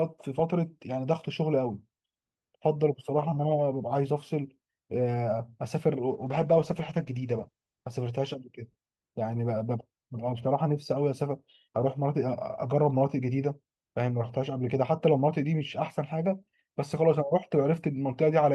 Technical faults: call bitrate drop

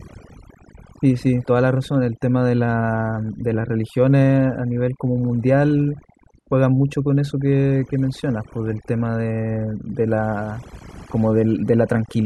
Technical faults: overdone noise removal

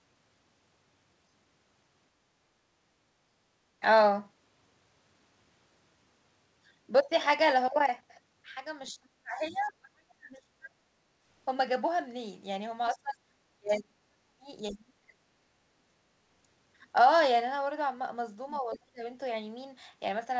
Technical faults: speech suppressed in double talk; other side's voice leaking through

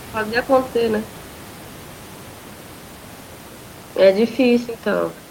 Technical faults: none

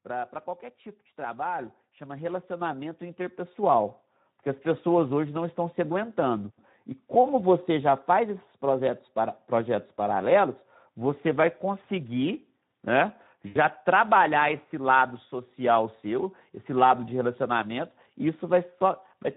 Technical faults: Speex codec; microphone volume stepped up; VoIP packet loss concealed by the speech codec

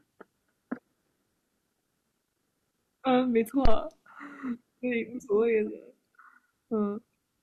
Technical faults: phantom power thump

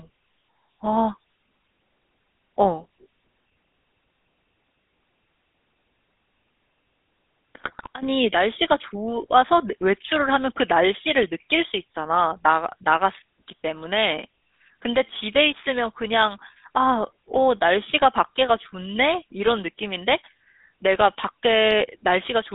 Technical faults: GSM full-rate codec; GSM bit errors

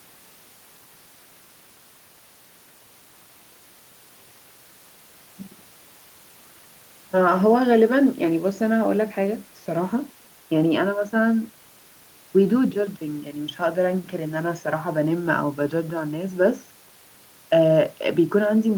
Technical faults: none

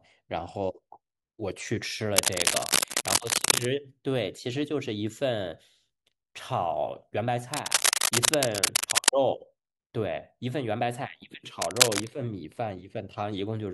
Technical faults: cable scratch noise

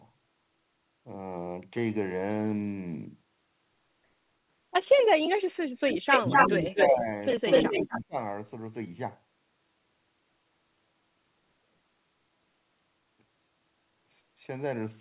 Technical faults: echo leak; speech suppressed in double talk

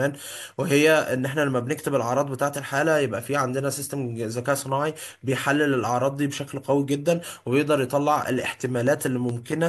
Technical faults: train of clicks

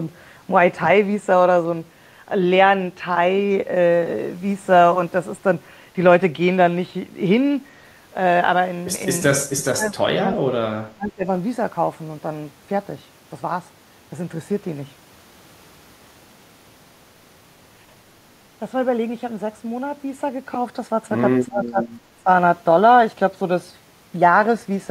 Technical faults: speech suppressed in double talk

